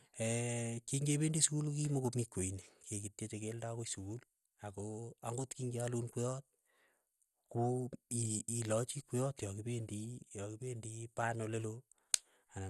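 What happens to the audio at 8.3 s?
At 8.3 s the speech, like the rest of the clip, sounds dull and gurgling, with nothing above about 12.2 kHz, most likely MP2 compression at a low rate around 64 kbps. Starved sub-bands switch off and flicker, and what remains is coarsely quantised. A plain low-pass filter would sound dull but clean, without that granular churning.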